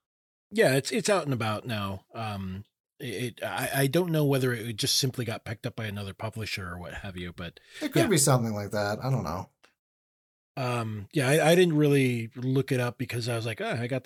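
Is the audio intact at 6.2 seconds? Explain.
Yes, at 6.2 seconds the audio is intact, with no dropout, click, distortion or other fault at that moment.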